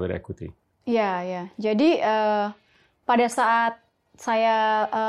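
No technical faults can be heard anywhere in the speech recording.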